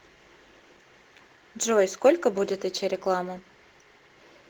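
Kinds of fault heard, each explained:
Sample clock jitter: faint hiss and roughness throughout, rising on loud, bright speech to roughly 30 dB below it, as an unsteady converter clock mistimes samples by microseconds.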